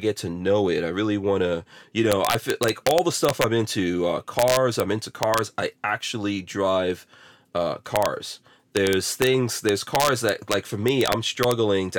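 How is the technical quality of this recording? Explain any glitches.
The recording is marred by integer overflow: harsh, violent cracks that burst out of the louder stretches of speech. They come at 2.12 to 3.44 s (after "really want to you"), 4.39 to 4.80 s, 5.23 to 5.39 s (before "I actually drive uh"), 7.96 to 8.06 s, 8.77 to 9.27 s and 9.69 to 11.51 s. The gain pushed peaks past the largest integer value, up to about 3 dB over, and instead of being limited they wrapped to the opposite sign, slamming across the full range. That is far sharper than ordinary clipping.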